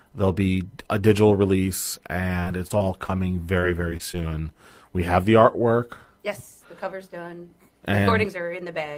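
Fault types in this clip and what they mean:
Repeated packet loss (robotic sound): short holes, none over 28 ms, come in quick succession, each patched by stretching the preceding sound. This turns the speech choppy after "be a digital release" (2.39–3.16 s) and again at 3.60–4.29 s, unlike one isolated dropout.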